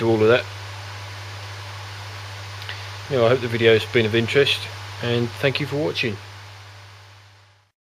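Nothing stood out as a technical fault on listening to this recording.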